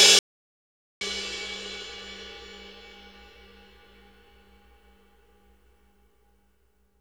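From 0.19 to 1.01 s the sound cuts off abruptly into dead silence with no room tone, then resumes mid-flow, about 0.82 s lost. This audio dropout to silence likely comes from the input briefly disconnecting or muting while recording continued writing silence.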